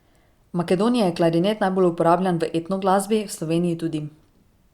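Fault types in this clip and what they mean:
No faults can be heard anywhere in this recording.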